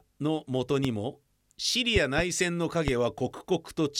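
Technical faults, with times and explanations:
0.85–0.88 s, 1.96–2.22 s and 2.88–2.91 s, loud pop: sharp thumps about 15 dB above the speech, and a double pop about 10 dB above it in the middle, while talking continues underneath. A sudden voltage spike, likely from a switch, plug or static, produces each one.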